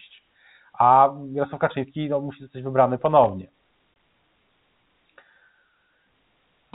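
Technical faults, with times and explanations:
3.06–3.29 s, loose connector crackle: an irregular burst of scratchy crackle for about a quarter of a second, as a worn or dirty contact rapidly makes and breaks, chopping the speech signal and adding pops wherever the line carries any DC offset.
3.94 s, packet loss filled with silence: a short 20 ms hole with hard edges drops out of the speech. One packet went missing and the receiver played silence in its place, so the gap matches a single packet's length.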